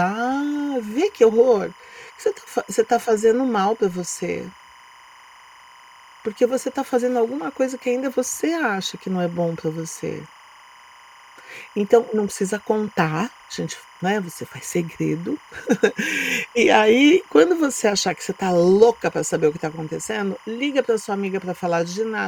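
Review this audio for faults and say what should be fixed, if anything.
Timecode bleed runs through the whole speech. A chirping warble sits around 25 dB below it, flipping between about 1 and 2 kHz. It matches 25 fps timecode leaking from an adjacent track or cable. Keep timecode on separate, shielded cabling and tracks, away from audio lines.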